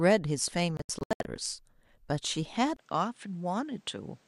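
At 0.77 s a digital broadcast dropout begins and runs to 1.26 s. The receiver mutes wherever frames fail to arrive intact, so about 288 ms of speech vanishes in several short holes spread over 480 ms, the longest lasting 72 ms. It sounds like rapid stuttering gaps. On the waveform these are flat silent slots cutting through the envelope, and on the spectrogram they are clean vertical black bars across every frequency.

At 2.77 s the sound drops out for 20 ms. It then returns duller and about 5 dB quieter, with a new faint noise floor roughly 40 dB below the speech, all the way to the end. This is most likely an input switched to a poorer device. On the spectrogram everything above 10 kHz disappears at that point, leaving a hard upper edge. The waveform shows the short gap followed by a lower envelope.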